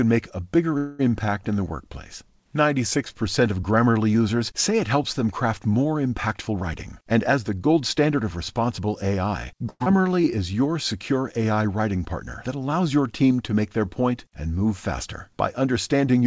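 Right at the start, from 0.78 to 1.01 s, there's a call audio freeze. The sound stalls and gets stretched out into a fading buzzy tail for about 210 ms, then picks up exactly where it left off. Nothing is actually lost, but everything after that point now sits roughly 210 ms later. That pattern most likely comes from packets getting held up until the jitter buffer ran dry.

From 6.37 to 8.79 s you get a jitter buffer speed-up. The receiver had more audio queued than it wanted, so it kept snipping out tiny pitch-period-sized slices, trimming something like a fifth of a second in total. The result plays at about 109% speed with the pitch unchanged, so this stretch sounds a bit rushed.

Then at 9.70 to 9.88 s there's a long network dropout, though a short one by the usual standard. The last sound gets smeared into a decaying buzz for about 160 ms, then there's roughly 30 ms of silence. When the audio returns, about 80 ms of it is simply gone. 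Most likely the packets for that stretch never made it through.

Right after, from 9.96 to 10.32 s, comes a jitter buffer slow-down as the buffer rebuilds its cushion. It repeats single pitch periods to add about 59 ms, so the sound drags at roughly 86% speed and keeps the same pitch.

At the very end, 15.65 to 16.23 s, there's another jitter buffer speed-up at about 109%. It shaves off somewhere around 70 ms, and that closing bit feels hurried.

Underneath all of this you can hear the call codec path doing its thing: nothing above 8 kHz, which points to a wideband codec like G.722.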